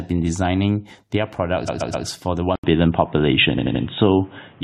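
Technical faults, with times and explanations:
1.67–2.06 s, repeated frames: Just after "been designing their", the sound stutters. The same 128 ms block of compressed audio is played three extra times because its data was written or sent again, adding 384 ms to the clip.
2.56 s onward, input switched to a poorer device: After "for the", an 80 ms gap gives way to a dull, boxy sound with nothing above 3.8 kHz, a level shift of about 5 dB, and a new noise floor about 30 dB under the signal. The likely cause is the recording input moving to a narrower-band microphone or headset call profile.
3.57–3.83 s, repeated frames: A second stutter, inside the duller stretch, loops an 85 ms block three extra times. The resent data stretches the clip by 256 ms.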